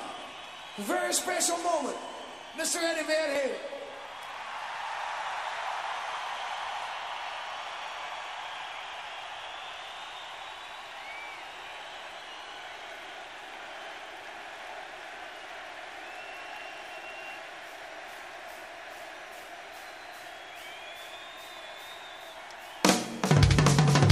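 The audio has three skips, at 3.36, 9.22 and 12.19 s. At each one the sound jumps forward instead of continuing, with no gap of silence, as if a sliver of roughly 10 ms had been cut out and the two edges butted together. This points to a likely dropped buffer (overrun): the capture software fell behind, the hardware overwrote samples before they were read, and that short stretch was lost outright.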